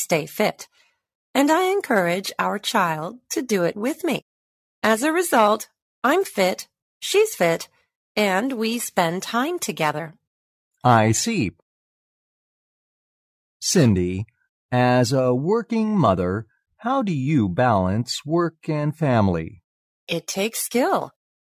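No technical faults can be heard anywhere in it.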